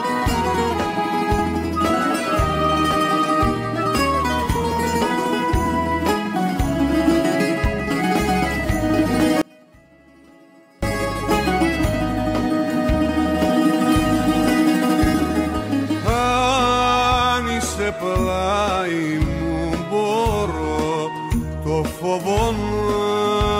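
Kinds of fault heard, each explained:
Audio dropout to a faint residue: The sound cuts out abruptly at 9.42 s and returns at 10.83 s, a gap of about 1.4 s. The gap keeps only a faint leak of the signal, roughly 30 dB down. The likely cause is a brief loss of the wanted signal while the path stayed live.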